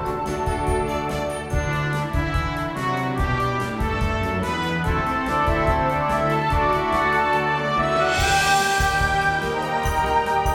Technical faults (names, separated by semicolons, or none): none